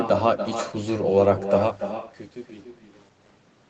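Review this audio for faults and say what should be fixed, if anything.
Echo with no canceller runs through the whole clip: every phrase is trailed roughly a third of a second later by a thinner copy sitting about 9 dB below the direct sound. The far end is playing the call through a loudspeaker, its microphone is picking that playback up, and nothing subtracts it before it is sent back, so the round trip returns the talker's own voice as a delayed shadow. To prevent it, enable acoustic echo cancellation on the far-end device or have that participant use headphones.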